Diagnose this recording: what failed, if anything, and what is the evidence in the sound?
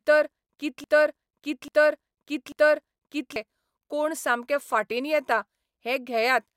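From the first instant to 3.36 s the speech is caught in a broken-record loop: one 0.84 s fragment plays again and again, three repeats back to back, already under way when the recording begins. The likely cause is a stalled playback or streaming buffer that kept resending the last block it held, so the speech meant for that span is gone. Unlike an echo, the repeats do not decay or overlap. Unlike dropout stutter, each cycle is a complete, identical fragment.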